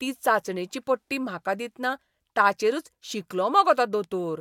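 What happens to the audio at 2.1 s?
At 2.1 s the speech carries on intact, with no dropout, click, distortion or other fault.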